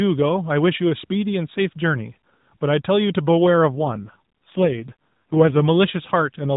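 From 3.74 to 5.60 s an AMR rate drop roughens the speech into buzzy, synthetic tones, fitting a fall from 12.2 to 4.75 kbps. The spectrogram shows blurred harmonics, an unchanged band and no gap.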